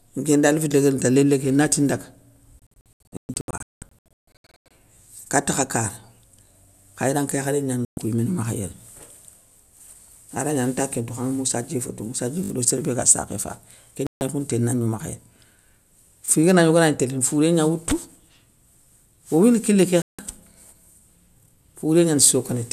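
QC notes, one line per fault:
2.59–20.19 s (at 2.59–4.71, 7.85–7.98, 14.07–14.22 and 20.02–20.19 s), digital broadcast dropout: the receiver mutes whenever frames fail, so sound drops to silence and resumes later. At 2.59–4.71 s about 1.27 s goes missing in scattered holes across 2.1 s, the longest 192 ms. Single gaps of 120 ms after "khayranke yakharé", 144 ms, and 168 ms after "owouyini kilé ké" follow, which fits 24 ms frames. Nothing repeats, which sets this apart from a buffer fault.
12.44–12.50 s and 16.26 s, repeated buffer: when fresh audio arrives late, the device replays its last 20 ms block with a hard join each time. At 12.44 s, just before "do sér bé ga", one block sounds three extra times, roughly 70 ms of new sound lost. At 16.26 s it repeats once, about 20 ms lost. The blocks are so short that the repeats come out as a brief buzz or click. Repeated sound, not silence, separates this from a dropout.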